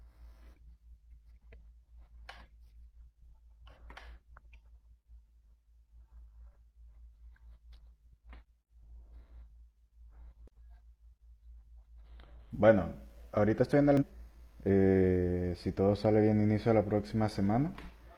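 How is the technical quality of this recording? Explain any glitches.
Two brief glitches break into the speech. From 10.48 to 10.50 s and again from 13.97 to 14.03 s there is a short chirp or squawk. That is damaged data in the compressed stream: the decoder misreads corrupted frames, loses sync and jumps to the next valid frame header.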